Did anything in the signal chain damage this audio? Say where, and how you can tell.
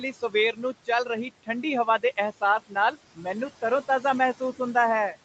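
Yes. In the call processing, the noise suppressor pulls the room noise down by about 18 dB throughout, so the residual noise sinks between the words and rises under them.

The noise suppressor also cut speech at 0.02–0.34, 0.52–0.88 and 1.86–2.18 s, mistaking quiet speech for noise and ducking it about 14–15 dB for roughly 100–150 ms each.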